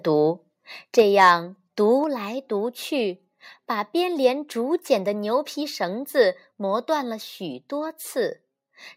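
Between 0.98 and 1.32 s the microphone's input gain is set too high for the loudest moments, so the waveform peaks push about 4 dB past the converter's ceiling and have their tops sheared flat, which points to a likely microphone overload. A few percent of the samples in that stretch were pinned at the converter's limit, and the voice picks up a harsh, crackly, buzzing edge on its strongest syllables instead of rounding off cleanly.

At 1.02 s, while that distortion is still under way, the input level drops by about 3 dB in a single step, most likely the call software reacting to the clipping by stepping the microphone volume down. A second microphone volume step-down follows at 2.04 s, this time by about 4 dB. Each step is heard as an abrupt drop in loudness, with voice and room background falling together rather than fading.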